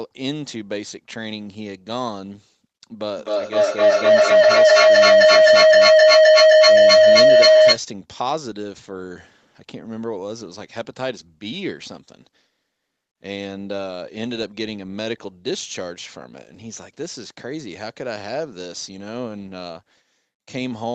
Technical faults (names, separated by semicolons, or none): feedback howl